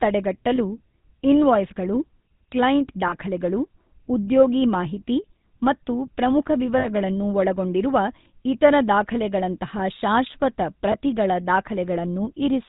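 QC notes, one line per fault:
throughout: GSM full-rate codec. The buzzy, gravelly roughness fits 13 kbps full-rate coding, which rebuilds speech from a vocal-tract model driven by sparse regular pulses. A spectrogram shows nothing above 4 kHz and a smeared, comb-like harmonic texture in voiced stretches.
0.56–0.78 s, 3.08–3.13 s, 6.78–6.88 s (after "ಉದ್ಯೋಗಿ ಮಾಹಿತಿ ಮತ್ತು ಪ್ರಮುಖ", before "ಒಳಗೊಂಡಿರುವ ಇತರ"), 10.92–10.96 s: lost GSM frames. Gaps of about 20, 40, 60 and 20 ms are filled by repeating the last good frame, giving a brief metallic ring. On a spectrogram these look like flat, frozen bands, and the waveform shows a short held envelope.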